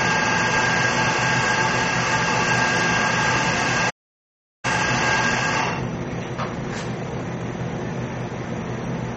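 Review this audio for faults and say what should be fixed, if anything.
Throughout, the audio sounds watery and swirly, with nothing above 8.2 kHz, which points to likely MP3 compression at a low rate that fits 32 kbps. Unlike a plain low-pass filter, the damage shifts from frame to frame. Encode at a higher bitrate.

From 3.90 to 4.65 s the sound stops dead for about 0.74 s, then resumes where it left off, the likely mark of a playback stall. It is not a dropout or gap in the recording, because nothing is skipped. Enlarge the playback buffer or unblock the audio thread.

From 4.65 to 7.59 s the audio runs hurried at 1.25 times speed with unchanged pitch. This is time-compressed catch-up working off the backlog, not a sample-rate error, which would raise the pitch. Preventing the stall removes the need for catch-up.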